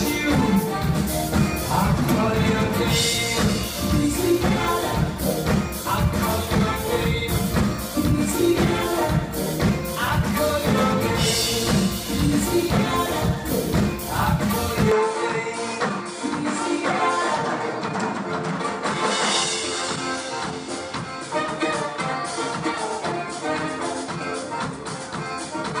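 At 14.9 s the sound turns duller, with nothing above 10 kHz and a faint new noise floor. Likely cause: input switched to a poorer device, without a gap.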